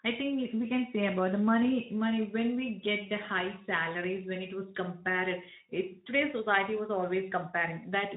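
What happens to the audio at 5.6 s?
Nothing goes wrong at 5.6 s: the speech carries on intact through that moment, with only the light, steady colouring of the Speex codec at around 15 kbps that runs through the clip.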